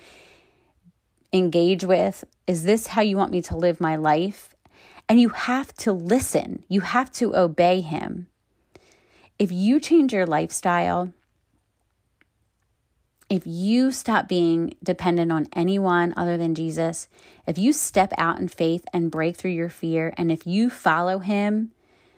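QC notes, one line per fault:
Nothing stood out on listening to the speech in this clip.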